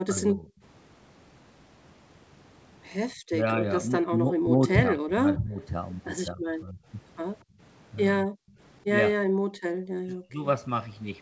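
Speech suppressed in double talk runs through the clip, most likely because the echo canceller could not tell the near talker from the far side's loudspeaker echo while both spoke, and so attenuated everything. The speech dips by roughly 15 dB from 0.06 to 0.48 s. From 3.32 to 5.61 s it loses about a second in total in pieces, dropping around 20 dB. It does the same between 6.32 and 6.79 s. At 7.44 s the background is gated by the echo canceller, which clamps the microphone for about 0.15 s while the loudspeaker plays, pulling the room sound down by about 27 dB before it returns. The later double-talk episodes go deeper, with speech all but cut out, down by roughly 40 dB, at 8.26 to 8.39 s, 9.19 to 9.57 s and 9.98 to 10.44 s. Throughout, the band stops at 8 kHz, which fits a wideband G.722 call path.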